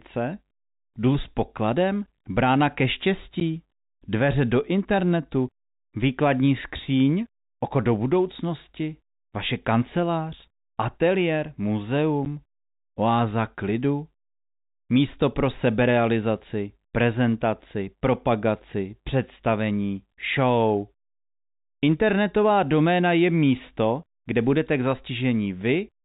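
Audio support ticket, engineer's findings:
Packet loss filled with silence at 3.4 s and 12.25 s: speech cut by a 10 ms hard-edged dropout, each gap fitting one lost 10 ms packet that the receiver replaced with silence. Waveform shows a flat notch. Spectrogram shows a blank vertical stripe within the 4 kHz G.711 band.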